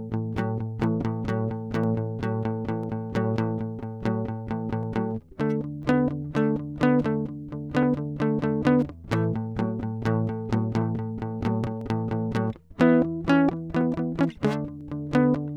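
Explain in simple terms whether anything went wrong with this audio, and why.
From 0.84 s to 14.81 s the music picks up a click almost exactly once a second, about fifteen in all. That's clock drift buffer slips: two devices likely running on slightly mismatched clocks, so every second a tiny handful of samples gets dropped or repeated.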